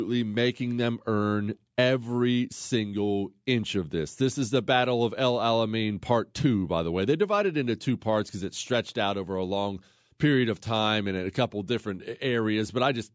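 Speech recording with no technical faults to report.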